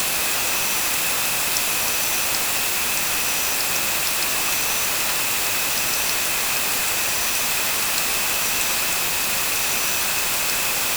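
Low bit depth with dither runs throughout: the signal is stored with only 3 bits, and dither turns the rounding error into a constant, even hiss roughly as loud as the sound itself.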